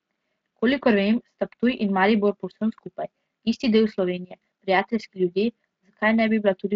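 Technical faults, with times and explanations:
No technical faults can be heard in this speech clip. It comes through the Speex codec with only light codec colouring and no content above about 7.8 kHz, which fits Speex's wideband mode at a fairly high quality setting.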